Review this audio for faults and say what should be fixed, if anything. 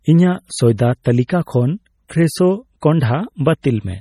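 Throughout the speech, heavy watery swirling and smeared consonants, likely from MP3 compression at a rate that fits 32 kbps, zeroing weak frequency lines frame to frame; nothing sounds above 19.3 kHz. Encode from the original at a much higher bitrate or with a lossless format.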